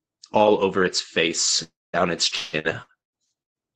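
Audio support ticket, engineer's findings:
Long network dropout, 1.63–1.96 s. Likely cause: stalled packet delivery to the jitter buffer, about 0.3 s of audio never arriving. Sound: the last fragment stretched into a fading buzz, then roughly 0.21 s of near-silence before audio resumes with that portion gone.

Repeated packet loss (robotic sound), 2.35–3.57 s. Cause: packets lost or late six times in quick succession, longest hole 180 ms, each patched by extrapolating the preceding audio. Sound: choppy, robotic texture, with close to half of the stretch synthetic fill and pieces missing. Band limit near 8 kHz throughout, consistent with Opus at 24 kbps.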